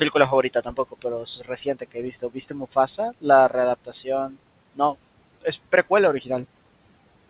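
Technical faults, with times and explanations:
0.43–1.05 s, 1.23–2.76 s, 3.85–4.07 s: speech cut by the noise suppressor. Quiet syllables sink about 14–17 dB with the room noise, fading rather than snapping to silence like a dropout.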